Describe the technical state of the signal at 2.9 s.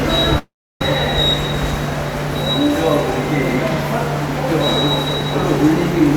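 At 2.9 s the signal is intact, with no technical fault present at that point in the sound.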